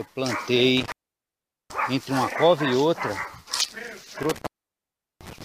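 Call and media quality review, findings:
Intermittent contact, 0.77 to 1.70 s. Audio drops out for about 0.78 s. Crackle at both edges, faint hiss in the gap. Probable component: loose cable or plug. Connection opens briefly, then reseats.

Intermittent contact, 4.23 to 5.43 s. Same symptom. Dropout of about 0.74 s, crackle on break and remake. Same probable component. Two separate openings point to a contact that shifts with movement.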